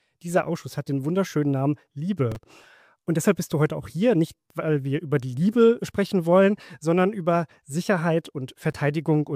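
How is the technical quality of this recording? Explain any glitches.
Processor overload crackle appears at 2.32–2.85 s and again at 8.54–8.75 s. Repeated missed deadlines on very short buffers, just a few milliseconds each, left stale audio with hard edges, heard as gritty bursts of crackle over the sound.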